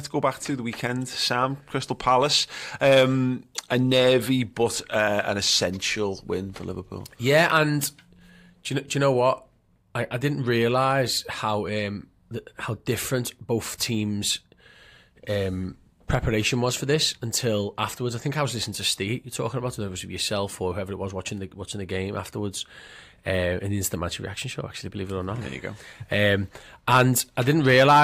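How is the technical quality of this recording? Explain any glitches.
Nothing goes wrong technically anywhere in this recording.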